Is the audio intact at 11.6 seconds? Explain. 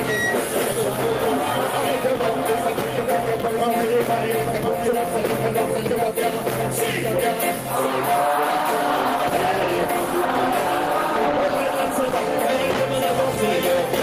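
No. At 11.6 s a call bitrate drop is in progress, running from 8.47 to 12.81 s. The encoder is starved and codes coarsely with high frequencies cut, so the sound turns rough and muffled, consistent with a fall from 32 to 14 kbps. A doubled audio track is also present, as throughout the clip. A copy roughly 5 dB quieter trails by about one second with no room colour, likely from a second, slower capture path. Gain pumping runs throughout as well. The gain swings by roughly 5 dB, squashing loud and soft parts closer in level, likely from excessive gain hitting a fast limiter.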